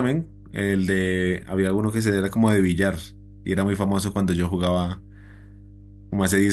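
A steady low drone sits under the speech from start to finish, pitched at 50 Hz with some low harmonics and roughly 25 dB below the speech. This is mains hum: a ground loop or nearby transformer has leaked the power-line frequency into the signal path.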